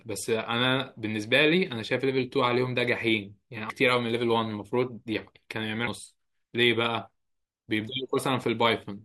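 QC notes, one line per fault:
3.69 s, 5.87 s and 8.17 s: damaged data in a compressed stream. Each is a very brief chirp or blip in the speech, under 20 ms, where corrupted bytes in the encoded stream make the decoder misread a frame, lose sync and hunt for the next valid frame header. Unlike a plain click from a single bad sample, the fault comes from the decoder losing its place in the encoded stream.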